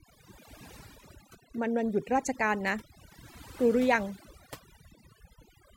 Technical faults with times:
0.00-5.77 overdone noise removal

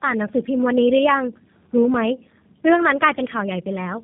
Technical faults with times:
0.00-4.04 tandem speech coding

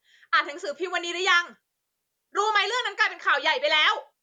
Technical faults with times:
none

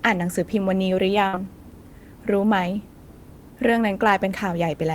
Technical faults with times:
1.27-1.35 burst of packet loss

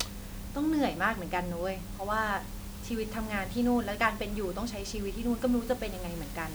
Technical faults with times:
none

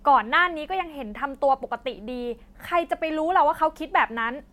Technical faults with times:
none

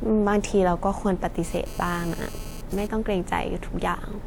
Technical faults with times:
1.44-2.87 GSM phone buzz

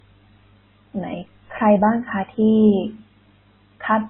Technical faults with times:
0.00-4.09 transcoding between lossy codecs

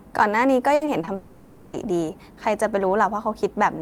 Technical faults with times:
0.75-1.09 repeated packet loss (robotic sound)
1.15-1.75 long network dropout

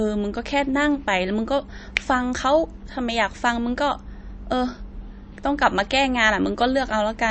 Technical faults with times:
0.00-7.31 MP3 compression

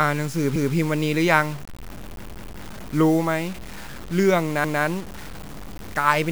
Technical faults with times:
0.00-6.31 low bit depth without dither
0.56-0.74 repeated buffer
2.23-2.60 repeated buffer
4.64-4.83 repeated buffer

